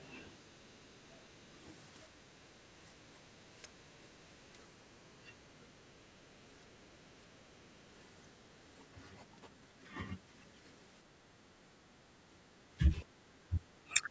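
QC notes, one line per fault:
0.0–1.24 s, 7.64–8.41 s and 13.02–13.58 s: other side's voice leaking through. A faint second voice, roughly 30, 40 and 20 dB below the talker, is likely loudspeaker echo the canceller missed.
2.05–7.52 s and 11.32–14.1 s: speech suppressed in double talk. The talker's own level dips, by around 10 dB and later about 20 dB, over roughly two seconds and one and a half seconds in all. This is likely the canceller ducking both voices together. Unlike a gain or level fault, the dips come only while the other side speaks.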